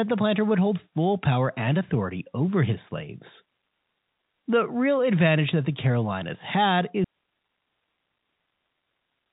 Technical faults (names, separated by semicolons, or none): audio dropout to a faint residue